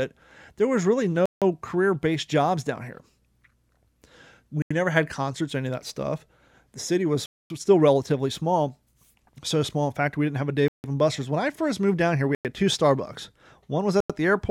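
Bluetooth stall dropouts break this speech at 1.26 s (after "was really"), 4.62, 7.26 (after "city was"), 10.68, 12.35 and 14.00 s. Each is a 84 to 242 ms silence before the sound resumes, likely from interference starving the headphone buffer.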